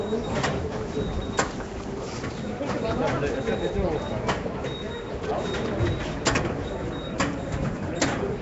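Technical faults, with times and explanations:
Throughout, Nellymoser compression: rough, hissy halo and smeared, watery texture, with nothing above 7.7 kHz. This is likely Flash's codec filling starved bands with noise, which fits about 32 kbps.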